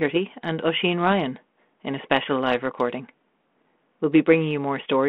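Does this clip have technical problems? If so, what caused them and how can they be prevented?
No, nothing in this speech clip stood out as a technical problem on listening, so there is nothing here that needs preventing.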